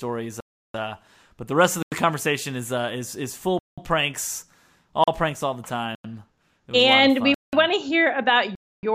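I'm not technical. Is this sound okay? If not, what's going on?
No. The speech keeps dropping out into dead silence. This happens at 0.40, 1.83, 3.59 (right after "is is is full"), 5.04, 5.95 (after "pranks all the"), 7.34 and 8.55 s (after "want to hear about"). Each hole lasts between 0.04 and 0.34 s. These are blocks of digital silence: whole chunks of sound were replaced with nothing, which points to the playback program not filling its next chunk in time.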